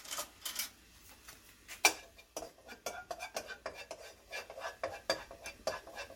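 At 1.84 s a sharp attack has pre-echo: a short hiss about 13 dB above the surrounding quiet rises roughly 10 ms before it, softening the onset. This fits a 26 ms transform block without short-block switching. Unlike ordinary echo or reverb, the smear comes before the attack.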